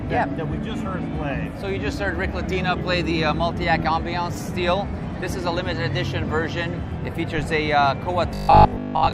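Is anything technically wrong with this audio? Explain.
Yes. From 8.35 to 9.13 s the sound turns into a rigid, metallic robotic buzz pitched at 50 Hz. It likely comes from repeated short buffers: with new audio arriving too seldom, a 20 ms stretch is looped over most of that span, replacing the real signal.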